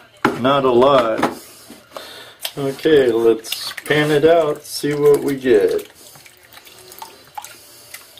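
From 0.25 to 1.25 s, hard clipping: the signal overdrives a stage by about 4 dB, flattening peaks into added high harmonics heard as crackling distortion.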